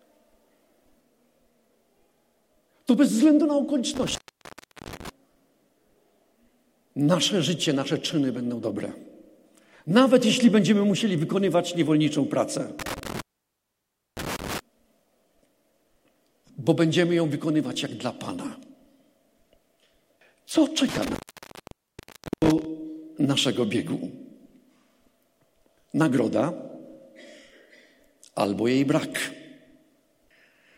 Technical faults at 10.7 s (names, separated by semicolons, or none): none